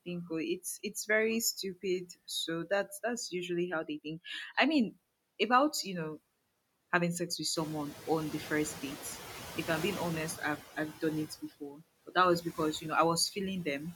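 Noise suppressor artifacts run through the whole speech clip. The suppressor pulls down whatever bands it judges to be steady noise by about 20 dB, frame by frame, so the background drops away in the gaps and returns beneath each phrase. Unlike a single dropout, this processing signature is constant and tracks the speech.

At 7.5 s the room noise jumps by about 15 dB and then sits about 14 dB below the voice. Right after "having sex with", from 7.55 to 10.38 s, the noise suppressor is catching up. Its noise estimate still reflects the quieter room, so the louder background passes with only about 8 dB of reduction, then gradually sinks over roughly 2.8 s as the estimate adapts, settling by "i've i've done". What separates this from the constant artifacts is the slow, steady fade of a louder background rather than a flicker tied to the words.

Between 11.3 and 11.83 s the suppressor cuts into the speech itself, treating parts of it as noise. 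About a fifth of a second of sound in total is turned down with the background, by as much as about 14 dB, and those fragments sound swallowed and faint.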